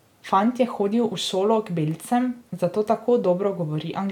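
No technical faults can be heard anywhere in this speech recording.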